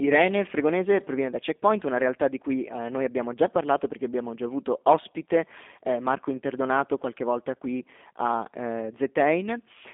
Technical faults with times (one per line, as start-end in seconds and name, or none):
0.00-9.93 G.729 codec